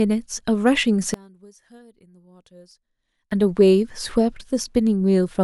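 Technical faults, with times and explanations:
0.68 s and 2.71 s, dropped samples: each is a single sharp click with nothing audibly missing from the speech. The likely cause is a couple of samples lost from the stream, a tiny fraction of a millisecond, so the waveform jumps straight from one value to a later one. That step is too brief to remove any sound, but the discontinuity spreads energy across all frequencies, showing as a thin vertical line in the spectrum.
1.14 to 3.31 s, one channel inverted: when the two channels are summed to mono, the speech falls by about 29 dB and nearly vanishes, leaving only a faint residue. This fits one channel likely having its polarity flipped. Content common to both channels then cancels in the sum, and only the small difference between the channels survives.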